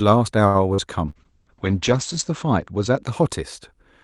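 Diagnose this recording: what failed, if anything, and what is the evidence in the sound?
Network, jitter buffer: a short stall from a late packet at 0.47 to 0.57 s. The buffer ran dry and about 71 ms of held sound stretches the speech, with nothing lost.

Network, receiver concealment: short concealed packet loss at 0.74 to 0.81 s. Roughly 40 ms never arrived and was replaced by extrapolated sound, heard as a brief smear.

Codec, Opus rate control: a call bitrate drop from 1.09 to 3.09 s. Speech turns rough and muffled as the top end falls from 12 kHz to 8 kHz, consistent with about 64 dropping to 9 kbps.

Network, packet loss: a burst of packet loss at 1.10 to 1.18 s. About 40 ms of speech is missing, bridged by a decaying held fill before playback resumes further on.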